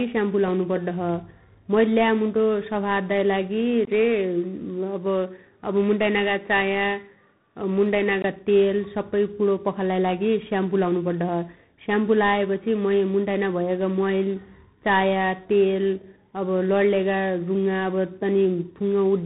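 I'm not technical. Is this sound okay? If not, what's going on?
No. Throughout, tandem speech coding: the speech passed through two phone-style speech coders in a row, so it sounds rough and noisy all the way through, not in patches.

From 3.85 to 8.24 s, the sound turns duller and boxier, then clears, with a brief gap at the switch. The likely cause is the input switching to a poorer device.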